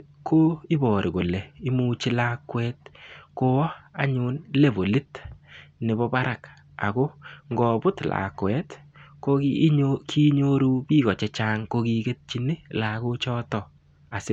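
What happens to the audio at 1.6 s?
Nothing goes wrong at 1.6 s; the speech there plays through intact, with no dropout, click or distortion.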